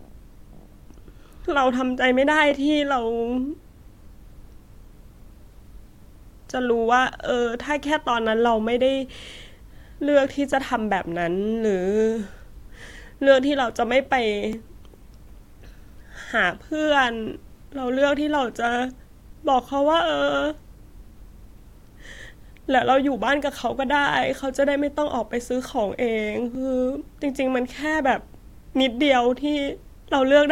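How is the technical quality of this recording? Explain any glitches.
The recording has a recurring glitch: a brief click or stutter at 2.51, 6.52, 10.53, 14.53, 18.54 and 26.55 s. These are overlapping chunks. Each tick is a sliver of the speech, about 6.5 ms long, played twice in quick succession. The audio was processed in 4.0-second blocks, and each new block begins slightly before the previous one ended, so the joins fall at that steady 4-second spacing and repeat a tiny fragment each time.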